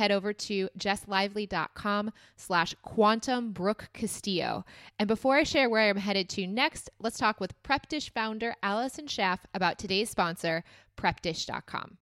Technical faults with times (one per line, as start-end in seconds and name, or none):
none